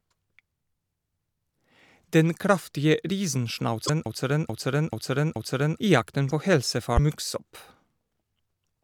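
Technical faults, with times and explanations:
3.85–3.89 s and 6.96–6.99 s, broken MP3 bit reservoir: each time the sound skips ahead and the first frames after the cut, 26 ms each, come out corrupted, likely because frames were dropped and the next frame read borrowed bytes from the wrong frame. On a spectrogram it shows as a thin broadband smear; the waveform shows a jagged discontinuity.
4.06–5.79 s, broken-record loop: a 433 ms fragment repeats exactly four times back to back, likely because the stream stalled and kept resending the last buffered piece, so the audio from that stretch is lost. A spectrogram shows identical blocks tiled side by side, and the waveform repeats with a seam every 433 ms.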